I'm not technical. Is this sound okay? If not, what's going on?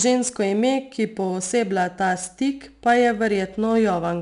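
No. The speech carries 4-bit ADPCM compression from start to finish. Each sample is stored as a coarse step from a prediction, so a gritty hiss rides on every loud syllable and sharp attacks sound roughened. Nothing reaches above about 10.6 kHz, which dulls the sound.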